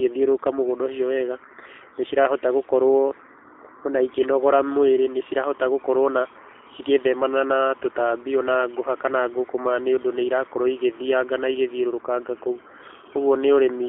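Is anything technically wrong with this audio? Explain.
Yes. Throughout the speech, G.729 codec coding is plainly audible, consistent with an 8 kbit/s VoIP link. The codec rebuilds each frame from a vocal tract filter, a pitch predictor and sparse pulses, so the speech sounds rough and synthetic. A spectrogram shows energy confined to about 250 Hz to 3.6 kHz.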